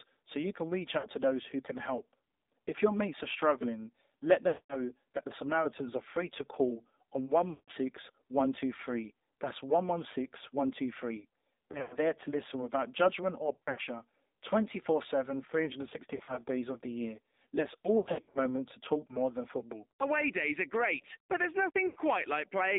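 The speech passed through the AMR narrowband mobile codec, whose low-rate vocal tract model left a buzzy, synthetic edge consistent with the 7.4 kbps mode. The band is confined to roughly 250 Hz to 3.7 kHz, so the voice sounds thin and boxy for the whole clip.

Lost AMR speech frames follow as radio errors corrupt frames and the decoder repeats the last good settings at falling gain. At 0.98 s, about 60 ms are lost and the voice briefly dips and warbles. At 4.48 to 4.87 s, right after "mates are struggling let" and before "that the", a 220 ms run smears the sound and lets it fade to near silence. At 7.50 to 7.70 s, 180 ms drag out and fade similarly. Between 11.72 and 11.99 s, just before "to listen without judgment", drops scattered over about 240 ms cause repeated brief dips and warbles, and similar broken patches follow at 13.54 to 13.81 s, 16.16 to 16.42 s and 17.98 to 18.40 s, the last spread over about 360 ms. 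At 21.88 s, after "are great but there's", an 80 ms gap leaves a brief warble.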